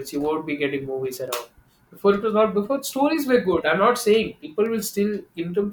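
It's a speech clip with two bit error spikes, sharp isolated ticks at 1.28 s and 4.66 s, peaking around -34 and -28 dBFS. Each sounds like a flipped bit knocking a few samples off by a power of two before snapping back, so the ticks are broadband and unrelated to the speech.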